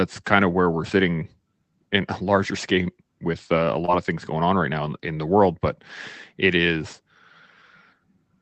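At 3.85 to 3.90 s there is short concealed packet loss: about 20 ms of the call arrived too late, so the receiver stretched the preceding sound to cover it and crossfaded back, leaving a brief smear rather than the hard silence of a plain dropout. The call path's band limit near 8 kHz holds throughout.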